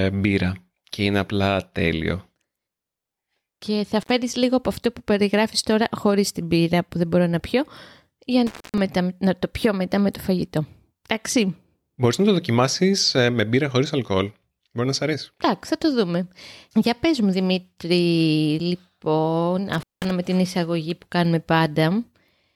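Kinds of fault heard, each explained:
Intermittent contact: a loose plug or cable briefly breaks the connection, so the speech drops out with crackle at each edge. It happens three times here, with the line open for about 62, 231 and 190 ms. The long one falls between "να πιω για να" and "να το πιω μετά".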